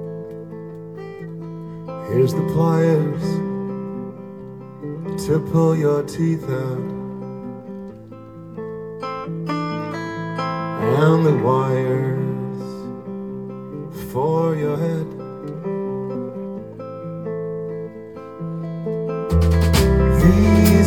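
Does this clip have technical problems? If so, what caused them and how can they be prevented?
Yes, there are two spots of compressed frames skipped, at 14.75 s and 16.14 s. Whole coded frames never got played, either because they're missing from the file or because the decoder rejected them as damaged, so the sound jumps ahead: about a tenth of a second at the first spot and about a fifth at the second, each a whole multiple of the 23.2 ms frame. To prevent it, verify the file's integrity after encoding and transfer, and re-encode or re-copy from the source if any frames fail to decode.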